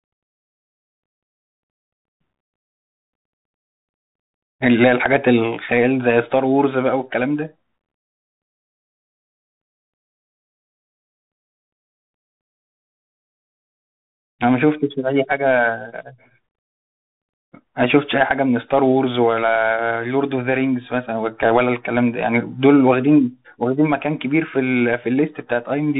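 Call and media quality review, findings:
Bluetooth CVSD headset codec, entire clip. Narrowband headset link, consistent with 64 kbps CVSD: one-bit up/down delta coding with adaptive step. Symptom: speech band-limited, nothing above about 3.8 kHz. Step size lags fast high-frequency energy, so loud bright passages distort and s sounds turn scratchy. Granular hiss under speech. Codec damage plainly audible.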